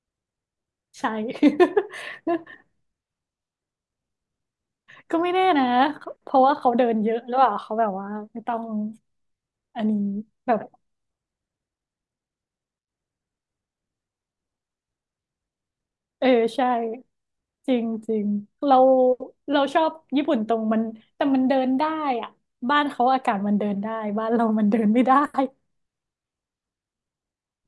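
A speech recording with no technical faults: nothing in the signal chain has audibly broken down or disrupted the audio.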